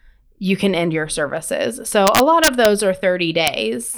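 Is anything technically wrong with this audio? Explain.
Yes. Integer overflow occurs twice in this speech. From 2.07 to 2.65 s, just after "can end your services", the signal was driven about 3 dB past the largest integer the path can hold, and instead of being limited, each peak over that point wrapped around to the opposite sign, jumping across the full range. That turns the loud parts into sharp cracks, far sharper than clipping. At 3.47 s a single peak, about 2 dB over, wraps the same way and gives one brief crack.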